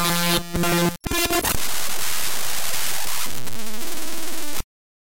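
A recording of everyday sound with audio missing between chunks: the recorder likely works in one-second blocks and dropped a short slice, roughly 30 ms, while handing over from one block to the next. At 0.63 s the sound skips abruptly, with the two sides butted together and no gap of silence.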